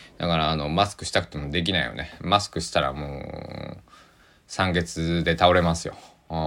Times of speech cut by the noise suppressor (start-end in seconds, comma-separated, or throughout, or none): none